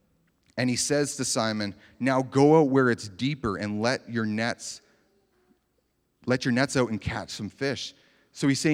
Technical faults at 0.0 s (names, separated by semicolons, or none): none